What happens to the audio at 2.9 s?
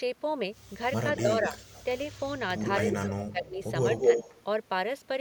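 At 2.9 s an echo leak begins and lasts until 3.07 s. A delayed copy of the speech comes back about 228 ms behind the original. It is fairly strong, only a few decibels below the direct speech. It sounds like a brief second voice trailing the first. The likely cause is a loudspeaker on one side whose echo canceller let part of the microphone pickup through, so that part was sent back.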